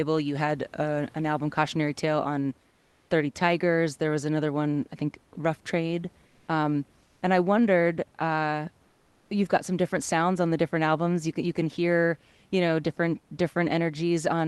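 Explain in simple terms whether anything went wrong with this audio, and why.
Comfort noise in place of the background appears four times: 2.71–3.07 s, 6.31–6.43 s, 7.03–7.21 s just before "and I wondered uh", and 8.89–9.25 s before "you've got some different". The room's natural hiss turns flat and slightly quieter, likely because the call stopped sending during pauses and filled them with synthetic noise.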